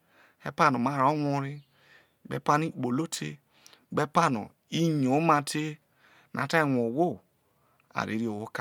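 Nothing in the recording stood out as a technical fault on listening.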